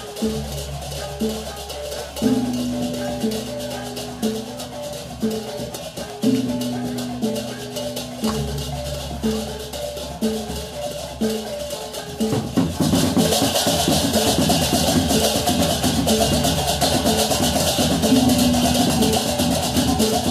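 At 6.10 s there's an electrical switching spike, a sharp snap at about -20 dBFS, likely a nearby switch or static discharge arcing into the audio line.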